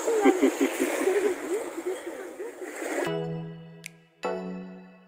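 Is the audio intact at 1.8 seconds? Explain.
Yes, the audio is intact at 1.8 seconds, with no fault audible at that moment.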